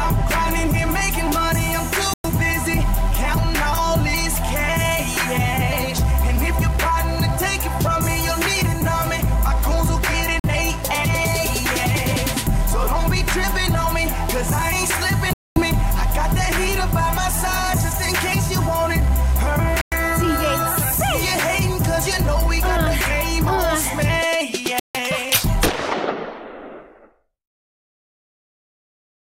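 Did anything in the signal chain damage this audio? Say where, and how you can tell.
Yes. The sound drops out to silence five times: 2.14 to 2.26 s, 10.40 to 10.47 s, 15.33 to 15.60 s, 19.81 to 19.96 s, and 24.80 to 24.96 s, with the longest gap near 15.3 s. After each hole the audio comes back further along, as though it had kept running unheard. That points to the wireless playback link, likely a Bluetooth dropout. Packets reached the headphones too late, were discarded, and the output stayed silent until fresh ones arrived.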